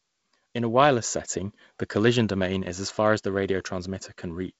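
No technical faults can be heard in this speech.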